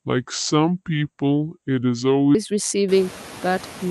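From 0.00 to 2.35 s the opening section plays at the wrong speed, at 0.711 times normal, so pitch and tempo drop together. The speech comes out deep and drawn out, about five semitones low, then snaps back to normal pace and pitch at 2.35 s. The cause is likely a playback or editing stage running that stretch against the wrong clock, stretching its timing and lowering every frequency in proportion.

Noise suppressor artifacts run through the whole clip. The suppressor estimates which bands hold steady noise and pulls them down frame by frame, but here it removes only about 1 dB. The background therefore dips slightly in the gaps and comes back up under the speech. This is most noticeable after roughly 3 s, when the room noise rises by about 24 dB and sits about 18 dB below the speech.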